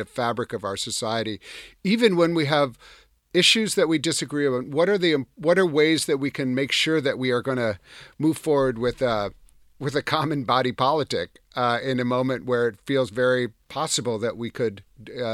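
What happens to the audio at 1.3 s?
Nothing goes wrong at 1.3 s; the speech continues cleanly through that moment with no dropout, click or distortion.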